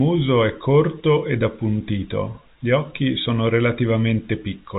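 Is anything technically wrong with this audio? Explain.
No, nothing technically wrong can be heard here.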